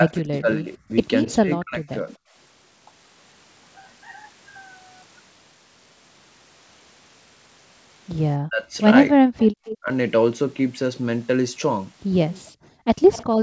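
From 0.00 to 2.11 s, speech is suppressed in double talk, likely because the echo canceller mistook overlapping talk for echo and turned it down, so the speech dips by as much as about 25 dB for roughly a second in total.

Within that stretch, at 1.24 to 1.30 s, there is an echo leak, likely residual loudspeaker pickup sent back. A faint copy about 20 dB down trails the speech by 244 ms.

From 8.41 to 9.89 s, double-talk suppression likely strikes again and harder, cutting speech by up to about 40 dB across roughly half a second.

From 9.37 to 9.78 s, there is another echo leak, a 244 ms delayed copy about 15 dB below the speech.

At 9.49 to 9.53 s, the background is gated by the echo canceller, which clamped the microphone during playback, so the room sound drops about 40 dB for a moment.

From 12.32 to 13.24 s, a third echo leak brings back the delayed 244 ms copy at about 20 dB down.

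From 12.5 s to the end, the background is gated by the echo canceller again, and the room sound falls away by about 40 dB.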